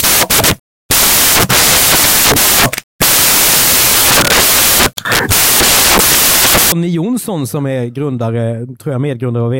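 From the start to 6.72 s the speech carries loud, hissing white noise: samples built from the wrong bytes. Each sample's bytes are assembled out of order or misaligned, so the rapidly changing low bits land in the most significant position and dominate every value. Unlike a steady added noise floor, this hiss tracks the signal. Unlike clipping, it is broadband noise rather than harsh peaks.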